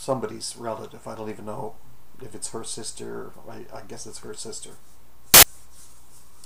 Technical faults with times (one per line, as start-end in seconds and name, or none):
5.34-5.43 file tags played as audio